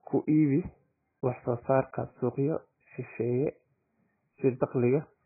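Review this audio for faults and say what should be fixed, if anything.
The whole clip, start to finish, sounds muffled and swirly: there's essentially nothing above 2.5 kHz, so the speech loses its crispness, and what's left has that watery, warbling texture with fizzy edges on sibilants. That's heavy damage, most likely from AAC compression. At a starved bitrate the encoder drops the top band and coarsely quantises the rest, which fits AAC-LC at roughly 12 kbps. To prevent it, encode speech at 64 kbps or more, or keep an uncompressed master.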